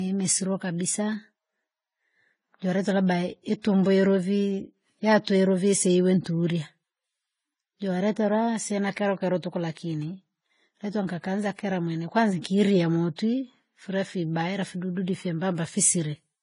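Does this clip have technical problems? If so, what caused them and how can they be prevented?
Yes. Across the whole speech clip there's nothing above about 10.6 kHz, and the top end has that smeary, doubled-up coding texture of two different codecs stacked on top of each other. That's most likely transcoding between lossy codecs: something like a low-rate Vorbis encode around 27 kbit/s fed into AAC-LC at about 32 kbit/s, with the second pass spending its bits re-encoding the first one's artefacts. To prevent it, always encode once from the original lossless source.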